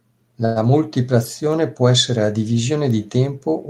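At 0.45 to 0.71 s a call audio freeze stretches the speech with a fading buzz, likely from delayed packets emptying the jitter buffer; speech then resumes intact.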